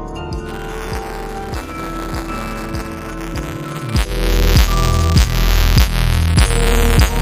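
From 0.46 s to the end of the clip there is buffer tearing: the write and read positions in the audio ring buffer have drifted and now cross inside every period. A small slice of each buffer, roughly a twenty-fifth, holds audio from about 10 ms earlier, spliced in with hard edges on both sides. The result is a steady robotic buzz at 200 Hz, which points to a buffer cycling every 5 ms, and it is heard only while sound is present.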